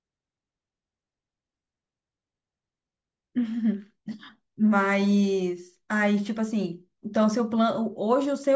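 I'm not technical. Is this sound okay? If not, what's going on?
Yes, nothing in this speech recording points to a technical fault.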